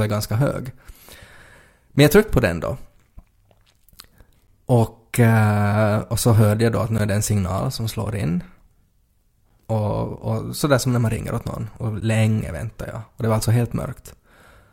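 At 1.96, 4.47, 6.98, 9.49 and 12.00 s the speech breaks with a gap between chunks: 12 ms hard-edged silences every 2.5 s, left at the chunk joins. Landmarks: before "jag tryckte på den", between "jag då att nu" and "är det en signal", and before "länge väntade jag".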